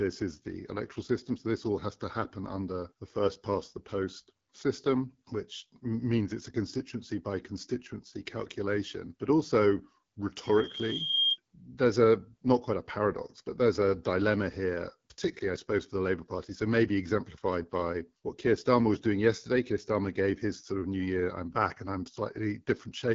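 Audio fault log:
Throughout: AMR wideband (HD Voice) codec. The speech sounds plainly rough and raspy, consistent with one of the lowest AMR-WB rates, around 8.85 kbit/s. The pulse-driven vocal tract model can't capture the speech finely at this rate, and nothing is present above 7.5 kHz.
10.43–11.38 s: loudspeaker feedback squeal. A single tone at 3.2 kHz swells over most of a second until it sits about 5 dB above the speech. The microphone is re-amplifying its own loudspeaker, and the loop's gain exceeds one at that frequency.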